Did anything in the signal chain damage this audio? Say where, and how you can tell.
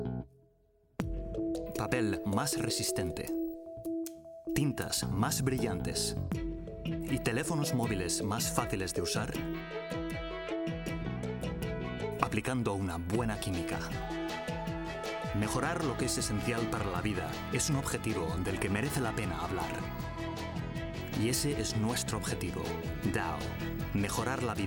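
No, nothing in the signal chain has damaged this audio. No stage from capture through to playback leaves any trace I can hear.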